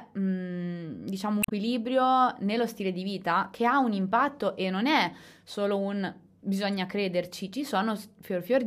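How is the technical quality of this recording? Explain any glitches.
The recording has two brief glitches in the speech, both damaged data in a compressed stream. At 1.40–1.52 s, just after "mm diciamo", and at 6.70–6.73 s, after "non è solo un", corrupted bytes make the decoder misread frames and hunt for the next header, producing a short glitch.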